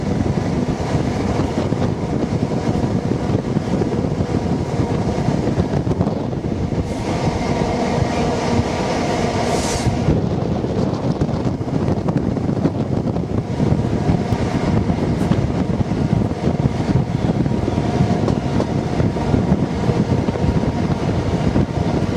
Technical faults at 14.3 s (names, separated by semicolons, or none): electrical switching spike